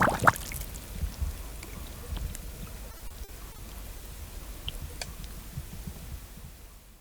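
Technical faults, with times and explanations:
2.91–3.60 s, repeated packet loss (robotic sound): short holes of up to 40 ms keep recurring within this 0.69 s stretch. Each is filled by prolonging the preceding sound, covering about a quarter of the span. The rapid recurrence, unlike a single dropout, gives a choppy texture with pieces missing.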